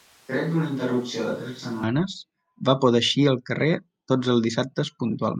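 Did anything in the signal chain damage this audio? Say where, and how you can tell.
Yes. A switch to a distant microphone is already under way when the clip starts and runs to 1.84 s. The speech sounds roomy, hollow and thin in the bass, roughly 5 dB quieter, with room noise about 30 dB down. The capture stage likely lost the close microphone and fell back to a distant one until the abrupt return.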